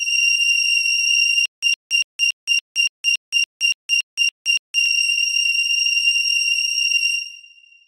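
From 1.46 to 4.86 s the audio falls into a stutter with silent gaps: a 115 ms fragment repeats twelve times, each followed by 169 ms of digital silence, a steady 283 ms cycle. This likely comes from a stalled stream replaying its last buffer. The waveform shows identical blocks separated by flat silent lines, and the spectrogram shows matching vertical stripes between blank columns.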